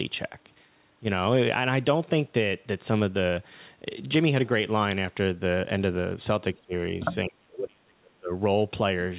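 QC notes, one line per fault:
6.53 to 6.73 s and 7.24 to 8.32 s, speech suppressed in double talk: the 4 kHz-limited call audio dips about 20 dB briefly, then sinks around 35 dB for roughly a second, likely the echo canceller failing to separate this side's voice from the loudspeaker echo during overlapping talk and turning both down.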